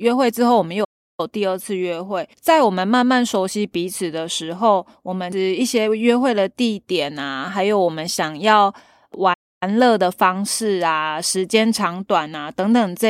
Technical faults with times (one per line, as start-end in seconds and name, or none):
0.84-1.20 playback stall
9.33-9.63 playback stall